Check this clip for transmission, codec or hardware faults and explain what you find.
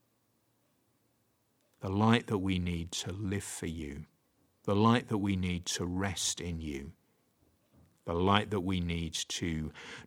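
No transmission, codec or hardware faults are audible anywhere in this speech clip.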